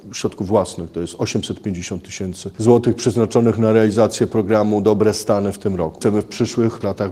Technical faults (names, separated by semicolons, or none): none